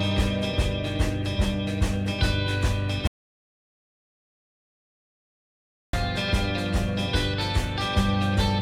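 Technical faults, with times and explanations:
3.07 to 5.93 s, audio dropout to silence: sound stops for 2.86 s, likely from a lost input. The waveform is flat near zero and the spectrogram shows an empty column with no room tone.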